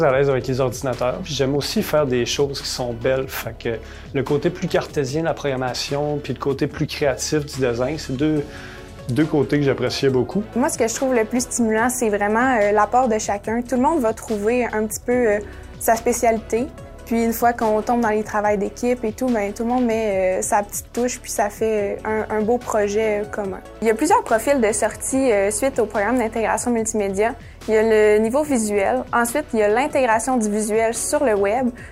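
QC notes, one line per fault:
4.90–5.75 s and 9.08–10.45 s, drift correction step: the sound jumps 6% faster and a semitone sharp (101 cents), then 6% slower and 107 cents flat. Speed and pitch move together, so this is likely clock-matching software resetting its buffer.
24.95–26.64 s, GSM phone buzz: a hard, raspy 217 Hz buzz full of harmonics, about 26 dB under the signal and unrelated to it. It holds steady throughout, which fits a nearby 2G phone on a call whose transmit bursts the audio circuitry is rectifying.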